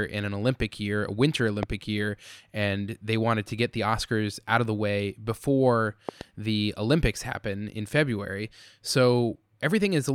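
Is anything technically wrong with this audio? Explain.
Yes. The speech carries two loud pops. The first, from 1.63 to 1.65 s, is a single sharp pop peaking roughly 15 dB above the speech. The second, from 6.09 to 6.23 s, is a pair of pops in quick succession, about 10 dB above it. Each is likely a voltage pulse from a plug, switch or static discharge, shaped by the following circuitry into a thump. Unlike a dropout or digital click, the speech continues uninterrupted beneath each pop.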